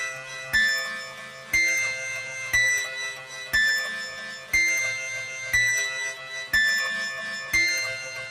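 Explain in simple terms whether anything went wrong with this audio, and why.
Noise suppressor applied to music or sounds, throughout the clip: a cleanup tool built for speech was left running. It mistakes steady, lingering sound for background noise and keeps turning it down, so the level rises and falls unevenly and the audio sounds thin and pumping.

Sound cut by the noise suppressor, at 0.13 to 0.54 s, 0.98 to 1.53 s, 3.15 to 3.46 s and 4.10 to 4.53 s: in each stretch the suppressor pushed the sound down harder than elsewhere. Held and fading parts sink or die away early, while sharp starts mostly survive.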